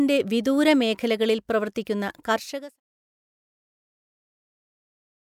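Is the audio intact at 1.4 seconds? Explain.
Yes, the speech is intact at 1.4 seconds, with no fault at that moment.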